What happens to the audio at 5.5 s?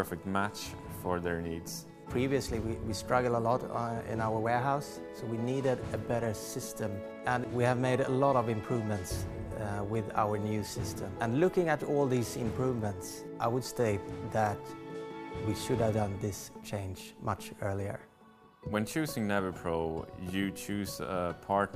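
Nothing goes wrong at 5.5 s; the audio is intact there, with no audible fault at that moment.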